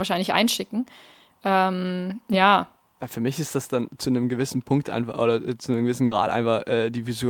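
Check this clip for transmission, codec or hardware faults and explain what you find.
One fault is present: a burst of packet loss at 6.05–6.13 s, just after "äh zu einem gewissen". The last sound is held and faded for 60 ms, then 60 ms of speech is skipped. Unlike a plain dropout, the gap is filled with the held, fading last sound, not silence.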